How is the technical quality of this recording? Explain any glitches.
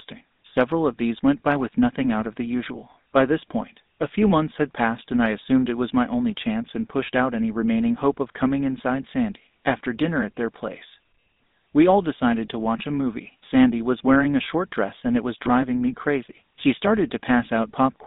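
The quality is limited by one fault that lasts the whole recording. Throughout, the speech sounds buzzy and gravelly, thin and boxed in, with nothing above about 3.7 kHz and little below 200 Hz. That is the signature of the GSM full-rate codec, whose low data rate fits 13 kbps. It models the vocal tract and excites it with a sparse, regular pulse train, discarding most excitation detail, and the damage is plainly audible.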